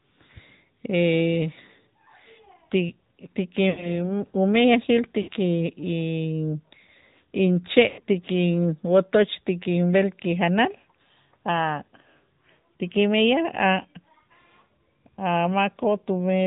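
The whole clip has been through the AMR narrowband mobile codec, and you can hear it plainly. Everything above 4 kHz is gone, so the speech sounds boxed-in and phone-like, with a buzzy, slightly synthetic edge. That comes from the codec rebuilding the voice from a vocal-tract model and a handful of pulses instead of the real waveform. The amount of damage fits one of the higher AMR-NB modes, somewhere around 10 kbps.

Then there are three spots with lost AMR speech frames: 3.70 to 3.98 s, 5.22 to 5.29 s, and 7.88 to 8.01 s. In each one the decoder had no good frames to work from, so it kept replaying its last pitch and vocal-tract settings at a falling level. You hear the sound smear and stretch, then sag toward silence, and it comes back rough for a moment afterwards. The missing audio works out to about 80 ms, 60 ms and 100 ms, which is what you'd get from runs of four, three and five 20 ms frames.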